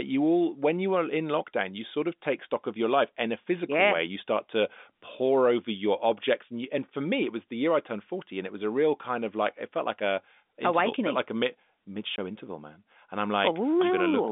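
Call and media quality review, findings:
Packet loss filled with silence, 12.16 s, between "like a mid mid" and "interval man". Single hole of about 20 ms, fitting one lost 20 ms packet. Receiver inserted silence instead of concealment, leaving hard edges. Telephone-band G.711 path audible throughout.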